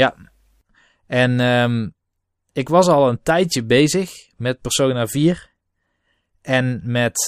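Listening through the speech, nothing stood out as a technical problem at any point.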